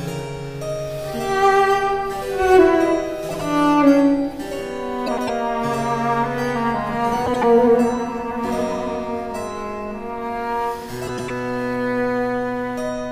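Frames out of order appear four times: at 3.29 to 3.41 s, 5.06 to 5.30 s, 7.26 to 7.44 s, and 11.07 to 11.30 s. In each, two adjacent blocks of decoded audio play in swapped order, so the later block is heard first. The blocks are about 52, 105, 78 and 105 ms long, multiples of roughly 26 ms, which points to swapped runs of 2, 4, 3 and 4 frames. Each stretch sounds like a brief garbled flutter. No time is lost.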